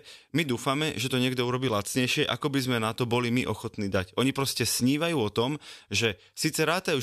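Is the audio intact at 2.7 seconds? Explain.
Yes, the audio is intact at 2.7 seconds, with no fault audible at that point in the speech.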